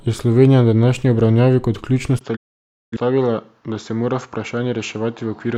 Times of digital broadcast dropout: 2.35-2.97

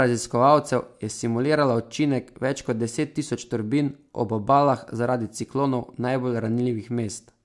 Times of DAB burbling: none

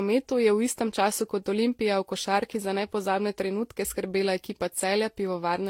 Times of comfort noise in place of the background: none

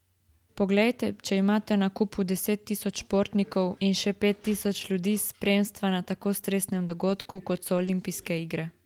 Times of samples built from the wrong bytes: none

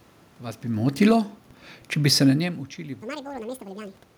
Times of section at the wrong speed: 3.02-4.18

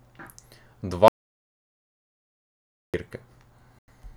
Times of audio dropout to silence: 1.08-2.94

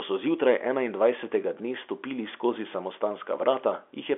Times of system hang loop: none

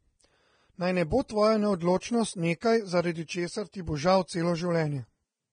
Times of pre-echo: 1.10-1.30, 2.00, 2.61, 3.72

